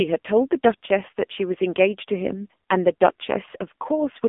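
Across the whole clip the speech sounds thin, boxed-in and buzzy, with a hard, synthetic edge on every syllable and no air or sibilant sparkle above about 3.6 kHz, while the low end is shaved off below 250 Hz. This is the AMR narrowband mobile codec, heavily degraded. Telephone-band filtering from 250 Hz to 3.5 kHz feeds a vocal-tract model rebuilt from sparse pulses, and the coarseness points to a low mode near 6.7 kbps.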